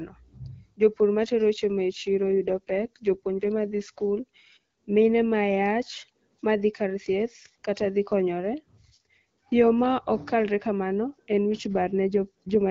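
A speech clip with two AMR rate drops, at 2.27–4.01 s and 11.68–12.69 s after "kamano en wich". The voice turns rougher and more synthetic, consistent with 12.65 falling to 8.85 kbit/s, yet the band holds and there's no gap, unlike a bandwidth cut or dropout.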